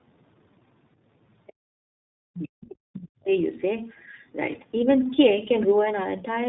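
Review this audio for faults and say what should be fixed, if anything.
Tandem speech coding runs throughout the clip. The speech has the rough, warbly, muffled quality of audio that passed through two speech codecs in a row, with a narrowband-to-transcoding path in between. Nothing is present above 3.8 kHz. The character points to an AMR-NB leg feeding iLBC, each coder re-quantising the previous one's artefacts. Prevention: negotiate a single end-to-end codec, or use transcoder-free operation, so the speech is encoded only once.

Other side's voice leaking through occurs from 2.61 to 2.76 s. A brief, faint scrap of a second voice appears, roughly 20 dB below the talker's speech. The likely cause is the far end's loudspeaker audio reaching the microphone, with the echo canceller leaving a residue it had not fully modelled. Prevention: improve echo canceller convergence and residual echo suppression, and reduce loudspeaker-to-microphone coupling on the device.

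Speech suppressed in double talk follows from 2.79 to 3.31 s. The talker's level collapses, dropping at its deepest by something like 40 dB, for about half a second. This likely happened because the echo canceller, facing both sides at once, could not tell local speech from echo and clamped everything down. Prevention: use a double-talk detector that preserves near-end speech and applies gentler suppression during overlap.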